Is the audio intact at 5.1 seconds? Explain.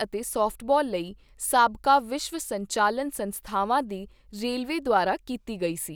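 Yes, the speech at 5.1 seconds plays through without any dropout, click, distortion or other fault.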